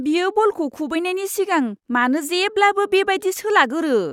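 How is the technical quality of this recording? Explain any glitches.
Listening to the recording, nothing stood out as a technical problem at any point in the speech.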